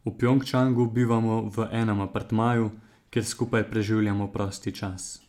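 No technical faults can be heard anywhere in this speech recording.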